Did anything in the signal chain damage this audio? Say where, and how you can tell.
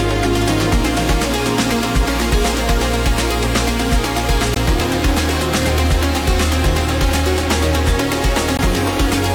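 Yes, at the playback stage, where streamed segments are joined. Hard-edged holes of silence, each about 18 ms, occur at 4.54 s and 8.57 s, falling on the boundaries of what sound like 2-second segments. This is a gap between stream segments: their time stamps leave a small space that the player fills with silence. Unlike a packet dropout, no audio is lost. The sound resumes exactly where it stopped, merely delayed.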